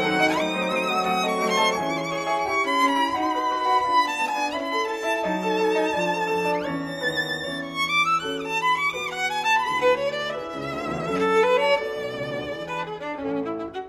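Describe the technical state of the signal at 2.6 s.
At 2.6 s you're in the adaptive stream starting at a low bitrate, from 0 to 6 s: nothing above 15 kHz and heavier artefacts, which fits roughly 48 kbit/s AAC before it jumps up.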